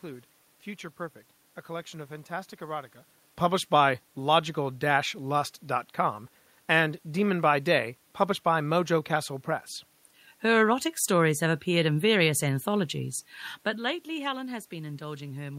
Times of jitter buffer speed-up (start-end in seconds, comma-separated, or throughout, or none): none